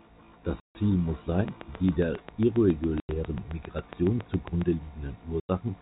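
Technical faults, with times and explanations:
0.60–0.75 s, 3.00–3.09 s and 5.40–5.49 s: packet loss filled with silence. Stretches of 150 ms, 90 ms and 90 ms drop to dead silence, fitting a 30 ms packet length. The speech cuts off and resumes abruptly.
1.48–4.63 s: train of clicks. About twenty sharp, alike pulses tick across the speech and the pauses at a steady 7.3 per second, peaking some 10 dB above the speech. Likely interference from nearby equipment or a faulty connection or power supply.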